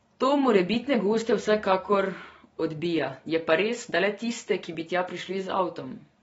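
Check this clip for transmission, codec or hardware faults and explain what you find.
One codec fault is present, running through the whole clip; no transmission or hardware faults are apparent.

From start to finish the speech shows AAC compression damage, likely from a low-bitrate AAC-LC encode, roughly 24 kbps. Nothing remains above 7.6 kHz, and the encoder's coarse quantisation leaves sibilants fizzy and vowels warbling. That warble is what distinguishes it from a simple low-pass filter, which would only dull the sound.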